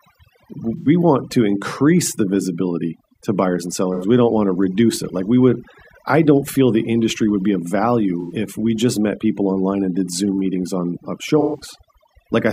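Overdone noise removal runs through the whole speech clip: the reduction is set so hard that bands near the noise estimate are pulled down or switched off, taking quiet parts of the voice with them. The background drops and breaks up into twinkling specks.

AAC frame loss with concealment then strikes four times. The decoder fills each gap from the last good spectrum, leaving a smeared, phasey patch. The first is at 0.78–0.88 s, just before "want to increase the". The second is at 3.94–4.05 s, after "visibility to buyers and". The third is at 8.21–8.33 s, between "industry would be of" and "if we just met". The fourth and longest, about 128 ms, is at 11.40–11.60 s. The shorter gaps of about 85 ms fit two lost frames, and the last fits three.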